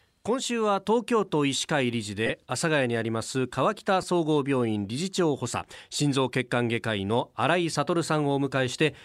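Speech with lost LE Audio frames at 2.26–2.30 s, 4.02–4.04 s and 7.74–7.76 s. The LC3 decoder concealed the 30 ms and 15 ms gaps by reusing the last spectrum with random signs, leaving short noisy smears.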